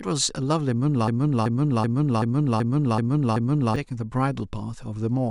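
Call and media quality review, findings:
Broken-record loop, 1.08–3.76 s in speech. A 0.38 s fragment repeats seven times back to back, replacing the audio. Likely cause: player or stream stalled, re-sending its last held buffer.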